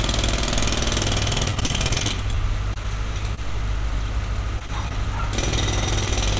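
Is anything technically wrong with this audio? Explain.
Yes. The audio has two kinds of packet loss on a call-style path. Nothing above 8 kHz, which fits a G.722 codec at 64 kbps.

From 1.46 to 2.36 s there is repeated packet loss, heard as a robotic sound. Eleven holes fall in under a second, the longest about 39 ms. Each one is patched by extending the preceding sound, so roughly a fifth of that stretch is synthetic. This is what separates it from the isolated dropouts: the patches come so close together that the sound turns choppy and robotic rather than merely smearing once.

Short concealed packet loss occurs at 2.74–2.78 s, 3.35–3.39 s, 4.59–4.62 s, 4.66–4.70 s and 4.88–4.92 s. Each time about 20 ms of audio failed to arrive, and the receiver bridged it by continuing the last sound, then blended back into the real signal. Each hole stands alone, so it comes across as a brief smear or wobble, with no sustained robotic texture. 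Two of them, at 4.59 and 4.66 s, fall close together.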